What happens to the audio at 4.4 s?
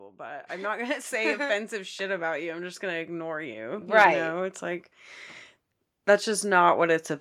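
At 4.4 s the automatic gain rising is still under way, from 0.05 to 4.92 s: the gain control lifts everything by about 12 dB, so speech and background swell together, visible as a steadily widening waveform envelope.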